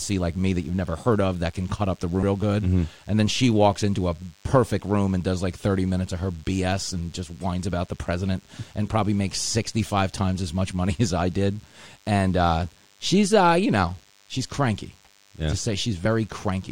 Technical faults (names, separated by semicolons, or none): DECT cordless phone buzz; damaged data in a compressed stream